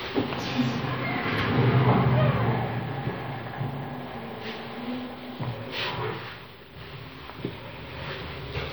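An everyday-sound recording with plainly audible MP3 compression throughout, likely from encoding at a low bitrate such as 64 kbps. Unlike simple low-pass filtering, the treble is cut off and quiet detail flickers in and out, giving a watery, swirling texture and smeared attacks.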